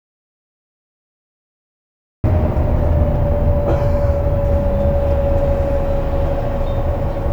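From the start until 2.24 s the clip is silent, an audio dropout to silence, likely a lost input, showing a flat waveform and an empty spectrogram before sound abruptly begins.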